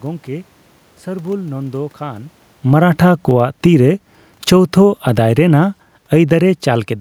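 From 2.58 to 3.83 s the speech and the room noise behind it sink together by about 9 dB, and again from 4.36 to 5.46 s by about 6 dB, shortly after the talker moves around 2 s. Because the background drops in step with the voice, this is automatic gain falling: the automatic gain control judged the input too loud or its background noise too strong and gradually lowered its gain, rather than the talker simply backing away.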